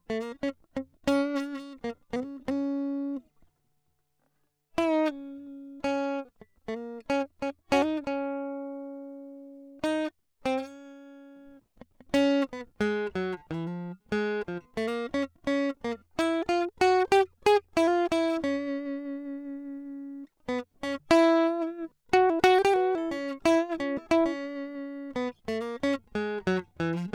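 No technical faults turn up anywhere in this music.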